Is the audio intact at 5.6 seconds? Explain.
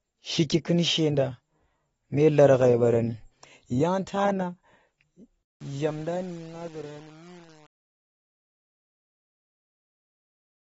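No. At 5.6 s the clip sits inside truncation distortion on a fade, running from 5.43 s to 10.61 s. The fade-out starts around 5.4 s and runs to the end. But the level stage keeps too few bits and adds no dither, which fits a 7-bit path. As the speech sinks toward the smallest step, the waveform collapses into coarse square steps. The tail turns gritty.

The same moment also carries AAC compression, heard across the whole clip. Nothing is left above 7.6 kHz, so the sound is dull and lacks air. The damage is plainly audible, which fits AAC-LC at a bitrate near 20 kbps. Starved of bits, the encoder smears detail. Sibilants and held sounds take on a warbling, fizzy texture. The likely cause is an encode at too low a rate.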